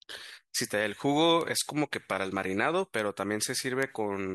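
Bit error spikes at 1.41 s and 3.83 s: in each, a single sample of the speech jumps by a power of two and snaps back, reaching about -15 dBFS and then about -9 dBFS. Each is heard as one sharp, broadband tick unrelated to the voice.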